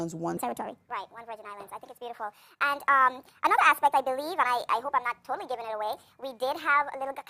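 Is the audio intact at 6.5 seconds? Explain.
No. Wrong sample rate affects 6.5 s, within a span from 0.37 s to the end. The samples play back 1.5 times too fast without conversion, which fits 32 kHz audio played at 48 kHz, so everything sounds hurried and about 7 semitones high.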